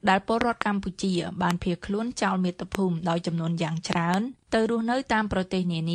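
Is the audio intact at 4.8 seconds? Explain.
Yes, the audio is intact at 4.8 seconds, with no fault to be heard at that moment.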